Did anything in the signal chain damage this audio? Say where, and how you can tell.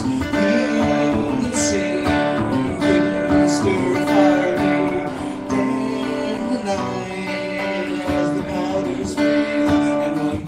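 No, nothing in the signal chain audibly damaged this audio.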